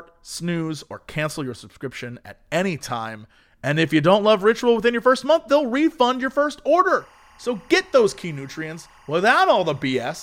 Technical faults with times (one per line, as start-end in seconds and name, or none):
6.90-10.22 timecode bleed